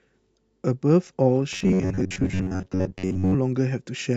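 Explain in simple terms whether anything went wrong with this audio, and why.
Robotic sound from repeated short buffers runs from 1.53 to 3.35 seconds: the speech becomes a stiff, metallic buzz near 94 Hz. The likely cause is new audio arriving too slowly, so the software kept replaying a tiny slice, about 11 ms long, for most of that stretch.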